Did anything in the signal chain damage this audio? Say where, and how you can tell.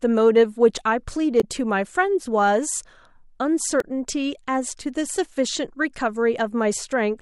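Yes. At the codec stage, damaged data in the compressed stream causes two brief glitches in the speech, at 1.40 to 1.44 s and 3.80 to 3.84 s. Corrupted bytes make the decoder misread those frames, lose sync and search for the next valid frame header.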